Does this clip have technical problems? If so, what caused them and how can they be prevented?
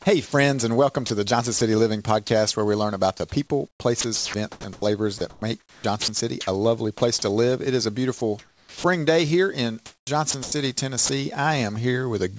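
Yes. Sound chopped by the voice detector appears from 0.26 to 2.30 s, from 3.68 to 7.01 s and from 9.86 to 11.09 s. Quiet syllables and word edges are swapped for synthetic hiss, about 150 ms in the first stretch, 1.11 s in the second and 360 ms in the third. This is most likely because the sender's voice activity detection kept toggling transmission off and on. Lowering the detector's threshold or adding a longer hangover time would keep weak speech from being cut.

Sound dropped by the voice detector occurs from 8.18 to 8.21 s. A 30 ms piece of quiet sound is lost and replaced by comfort noise. The sender's detector likely took that soft moment for background and stopped sending until speech triggered it again. A more sensitive detector, or disabling discontinuous transmission, would prevent this loss.

Comfort noise in place of the background runs from 8.18 to 8.84 s. For about 480 ms the real background gives way to a flat, featureless noise shaped roughly like it. 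This is likely the receiver filling a transmission pause with generated noise. Turning off discontinuous transmission keeps the genuine background throughout.

The sound also carries nothing above 8 kHz and has the coding texture of a wideband call codec, which points to G.722 at 64 kbps.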